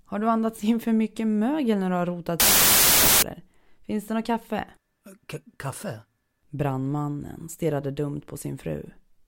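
From 2.40 to 3.22 s the speech collapses into loud, harsh noise, with the original sound faintly buried underneath, running fast at about 1.33 times speed, pitched up to match. This is a wrong sample width fault: audio written as packed 24-bit integers was read back as 32-bit integers. Each value then straddles byte boundaries and mixes parts of neighbouring samples, so only fragments keep the true top bits. Taking four bytes per sample instead of three also yields three-quarters as many samples, which produces the 1.33 speed-up.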